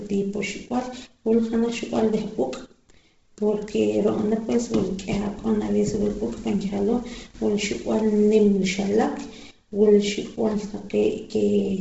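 This speech recording carries heavy coding damage from start to finish, likely Bluetooth LC3 compression. Nothing reaches above 7.7 kHz, and the upper band that remains has a breathy, grainy hiss where the codec has discarded detail and substituted noise. On a spectrogram this appears as a hard ceiling at 7.7 kHz with smeared, speckled texture beneath it, blocked into steps consistent with 10 ms frames. The degree of damage fits a low bitrate of about 16 kbps.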